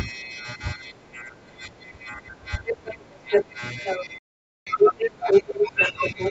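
Right at the start, between 0.22 and 0.32 s, there's a brief scrap of the other side's voice leaking through, very faint, way down under the talker at around 35 dB below. That's likely the far end playing on the loudspeaker and the echo canceller not quite scrubbing it from the mic. It's only a tenth of a second, so it reads as a ghostly flicker rather than a second voice.

From 0.87 to about 3.61 s you get speech suppressed in double talk. Both sides were talking at once, and the echo canceller, likely unable to tell its own talker from the echo, turned everything down. The talker's level sags by as much as roughly 20 dB across most of those three seconds, so the voice sounds like it's ducking and losing presence in patches.

The leak comes back much harder from 2.87 s to the end. This time the other side's voice sits at roughly the talker's level, maybe a touch louder, so it's a clearly audible second voice rather than a trace.

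Overlapping that, from 3.99 s to the end, there's a second stretch of double-talk suppression, with the talker pulled down by up to roughly 15 dB for around two seconds.

Inside that, from 4.18 to 4.67 s, there's a Bluetooth dropout: about 0.48 s of outright silence. Packets didn't reach the headphones in time, and the gap points to a few dozen of them going missing. When sound resumes, it has skipped ahead rather than picking up where it stopped, as if it had kept playing during the hole. The call's mic processing shows up in the band limit, with nothing above 8 kHz.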